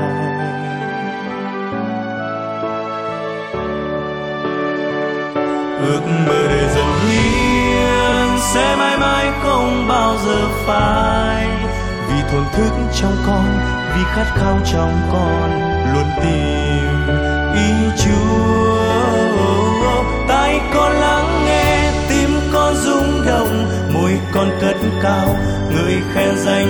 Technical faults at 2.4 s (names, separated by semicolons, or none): none